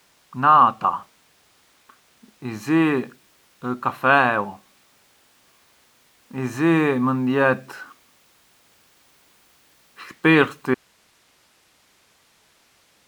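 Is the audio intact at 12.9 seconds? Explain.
No. From 10.74 s to the end of the speech, an audio dropout to a faint residue leaves only hiss, about 40 dB below the normal level. The signal was likely lost upstream while the path after the break stayed live, so the cut is abrupt rather than a pause or fade.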